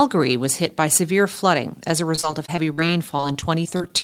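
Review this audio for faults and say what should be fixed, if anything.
Right after "severe flooding as a", from 2.15 s to the end at 4.04 s, there's repeated packet loss (robotic sound): sixteen short holes, the longest about 42 ms, each patched by stretching the last bit of sound. About a sixth of that stretch is concealed, so it comes out choppy and robotic. A larger jitter buffer plus forward error correction on the link should keep this from happening.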